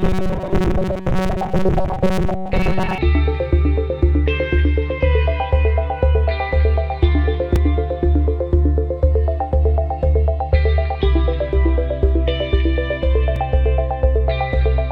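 From 0.01 to 2.98 s the sound turns rigid and metallic, with a steady buzz near 188 Hz imposed on it while the underlying contour still roughly comes through. This is robotic sound from repeated short buffers, most likely caused by audio arriving too slowly, so the playback repeats the last fragment, about 5.3 ms long to match that 188 Hz pitch, for roughly two thirds of this stretch while fresh material is dropped.

At 7.56 s and again at 13.36 s there is a brief tick, each a gap of 2.9 ms. Both are a block of digital silence. A chunk of output, which fits a 128-sample block, was left as zeros instead of being filled in time. The sound cuts abruptly to nothing and back without any fade, and at this tiny length the two hard edges merge into a single click.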